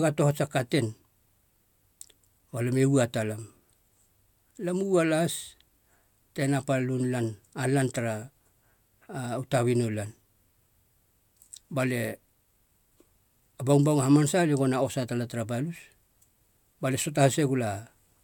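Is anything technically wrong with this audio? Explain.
No, nothing technically wrong is audible anywhere in this speech recording.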